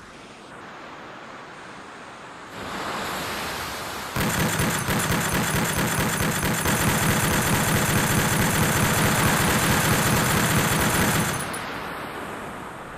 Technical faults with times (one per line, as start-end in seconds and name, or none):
6.65-12.97 doubled audio track